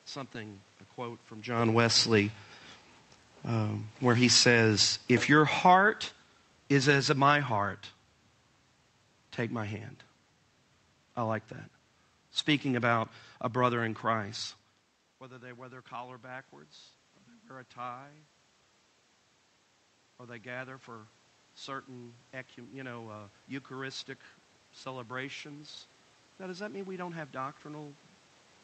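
Just after "um where", from 4.19 to 7.82 s, there is automatic gain falling. The gain control judged the input too loud, or its background noise too strong, and lowered its gain by about 6 dB over those three and a half seconds. Speech and room noise sink together. On the waveform the envelope tapers steadily across the stretch, and on a spectrogram the whole picture dims evenly, including the noise floor in the pauses between phrases.

From 15.19 to 18.27 s comes automatic gain rising. The input had dropped by about 18 dB, in line with the talker moving away around 14.5 s. The control responded by lifting its gain about 4 dB, which only partly restores the level. It rises again from 20.19 to 27.93 s, this time by about 6 dB over nearly eight seconds. In both stretches voice and background swell together. The waveform envelope widens gradually, and the spectrogram brightens uniformly, gaps included, with the background noise climbing alongside the speech rather than staying put.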